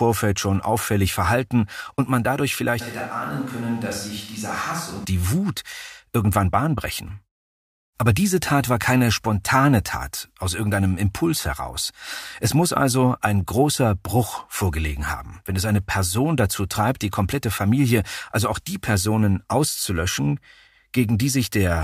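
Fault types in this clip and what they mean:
Switch to a distant microphone: From 2.82 to 5.03 s the speech turns abruptly roomy and hollow, with thinner bass. It drops about 5 dB, with room noise about 25 dB below it. The close microphone likely dropped out, leaving a farther one.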